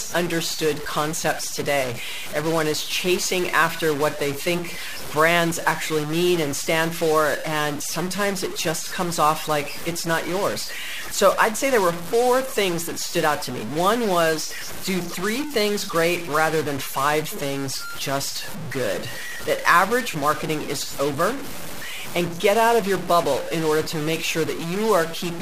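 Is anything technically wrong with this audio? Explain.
Yes. Throughout the speech there is a stuck bit, likely one data line held at a fixed value, so about half the samples jump by a fixed step of about -25 dBFS. That gives buzzy distortion, and pauses fill with noise because the bit flips with small values' sign, unlike clipping, which leaves pauses clean.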